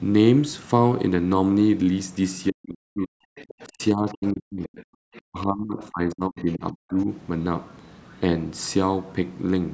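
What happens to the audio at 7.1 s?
Just before 7.1 s, the speech is coming out of a stretch from 3.66 to 7.07 s where it dips and drops out in pieces, at worst by around 40 dB and for about two seconds in total. This is speech suppressed in double talk, likely from an echo canceller that turned down both voices while both sides spoke at once. From 6.99 to 7.03 s, a brief, very faint scrap of the other side's voice leaking through can be heard, far below the talker. It likely comes from loudspeaker echo that the canceller failed to remove completely from the microphone.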